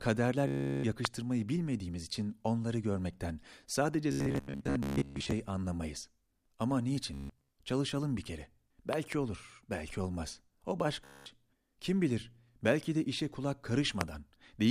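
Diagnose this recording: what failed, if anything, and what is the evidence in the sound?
Bluetooth packets are lost, so the receiver replays short buffer slices: a buzzing stutter at 0.48–0.84, 4.12–5.32, 7.14–7.48 and 11.04–11.26 s, then the speech jumps ahead.

Voltage transients, likely from switching or static, add loud pops far above the speech at 1.05–1.07 s, a double pop at 8.93–9.14 s, and at 14.01–14.03 s.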